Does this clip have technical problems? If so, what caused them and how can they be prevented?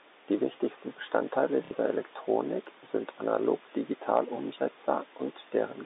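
Yes. Packet loss with last packet repeated, 1.65 to 1.71 s: about 60 ms went missing, likely two packets, and the receiver replayed the last one, giving a robotic stutter. Proper packet loss concealment and a jitter buffer with forward error correction would smooth over such gaps.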